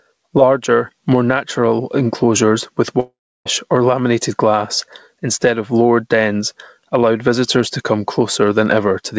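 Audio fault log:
throughout, gain pumping: The level breathes with the speech, swinging by around 10 dB. Loud and quiet passages sit unnaturally close together and the speech sounds squashed. The likely cause is input gain set far too high for the microphone, with a fast limiter or compressor clamping down on each peak and releasing in the gaps.
3.00–3.47 s, long network dropout: After "more natural enclosures with", the last sound is stretched into a fading buzzy tail, followed by about 0.32 s of silence. The speech resumes at "or laminated glass instead", with roughly 0.46 s of material lost. This is likely a burst of packets that never reached the receiver. Its concealment extended the final frames briefly and then muted. The call path uses G.722 coding, with nothing above 8 kHz.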